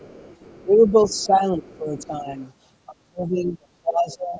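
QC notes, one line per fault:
0.00–0.64 s, 0.87–0.91 s, 1.10–1.26 s, 1.70–1.78 s, 1.99–2.06 s: other side's voice leaking through. A faint second voice sits well under the talker, roughly 30 dB down. It arrives in short scraps. The likely cause is loudspeaker echo that the canceller did not fully remove.
0.65–2.38 s and 2.86–4.39 s: speech suppressed in double talk. The talker's level sags while the other side speaks. It drops by around 10 dB in the first stretch and by around 30 dB in the second. The echo canceller likely could not separate the two and turned both down.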